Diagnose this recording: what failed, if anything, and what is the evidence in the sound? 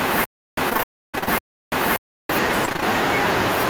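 Playback stage, stutter with silent gaps: From 0.0 s, already under way when the clip opens, until 2.29 s, a 242 ms burst of speech repeats, each time followed by 331 ms of digital silence, giving an even 573 ms cycle. The burst repeats three times. This is most likely a stalled stream or player buffer: on each retry it replays the last fragment and then runs dry. The audio that belonged in those stretches is lost.

Network stage, repeated packet loss (robotic sound): From 0.69 s to 1.29 s, the sound breaks into a rapid run of short holes, the longest about 32 ms. Each one is patched by extending the preceding sound, so nearly half of that span is concealment, which makes it choppy and robotic. A shorter burst of the same loss appears from 2.65 s to 2.84 s, with gaps up to 20 ms and a similar share filled in.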